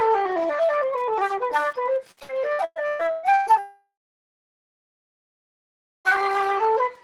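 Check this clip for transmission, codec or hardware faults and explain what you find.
Three faults turn up here: a faint tick running under the whole thing, then a choppy patch that runs straight into a long gap.

Wi-Fi interference runs the full length: a quiet, steady ticking about ten times a second, well below the sound. That spacing matches a 102.4 ms beacon, so a nearby Wi-Fi radio is getting picked up and rectified by the audio circuitry.

Repeated packet loss (robotic sound) hits from 2.11 to 3.56 s. There are eight gaps, the longest 120 ms, and concealment fills about 44% of that stretch by stretching the last bit of audio, so it comes out choppy with pieces missing.

Right after, from 3.59 to 6.08 s, there's about 2.5 s of missing audio. A short buzzy smear fades into roughly 2.2 s of silence before the sound picks up again further on. That's likely a long network dropout.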